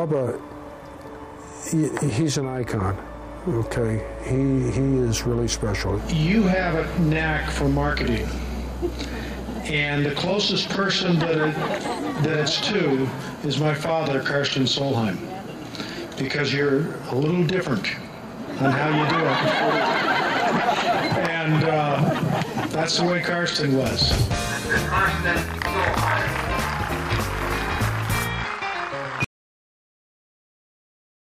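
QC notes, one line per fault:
29.24 to the end: audio dropout to silence, sound cuts off into silence with no room tone, likely from the input being lost while recording continued.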